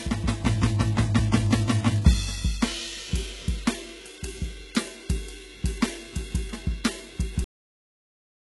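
Right from the start, the whole piece has the sound of HE-AAC compression, and that's likely the cause of the damage here. The codec only properly encodes the lower spectrum and fakes the treble by copying lower bands upward under a rough envelope, so the top end reaches up high but doesn't really belong to the music. The damage is heavy, with gritty, metallic shimmer up high and nothing above 11.5 kHz, which fits a very low bitrate of around 12 kbps.

Then at 7.44 s there's a cut-off end. The playback just stops mid-sound, with no decay or tail-off, and drops straight to digital silence for the last second of the clip. That's what you get when the final buffers never made it out, so the music is chopped off partway through instead of finishing.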